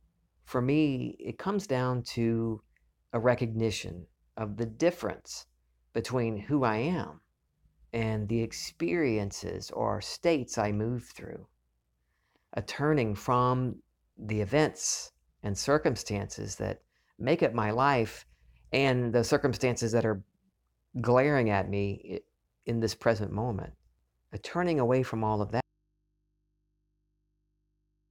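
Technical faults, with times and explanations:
25.6 s to end: audio dropout to a faint residue. Speech cuts abruptly to faint mains hum, likely from a still-live input that lost its signal.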